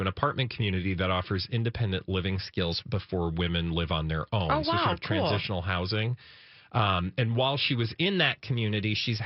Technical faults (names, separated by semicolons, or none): drift correction step